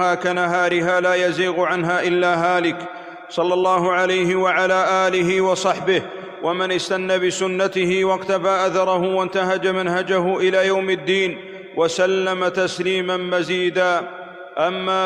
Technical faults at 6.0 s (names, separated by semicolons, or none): none